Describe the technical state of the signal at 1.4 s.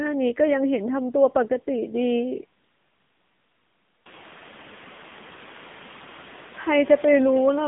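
At 1.4 s the speech runs through the AMR narrowband mobile codec, as it does for the whole clip. At 7.95 kbps, its coarse vocal-tract model sounds plainly buzzy and synthetic. Nothing passes above 3.7 kHz.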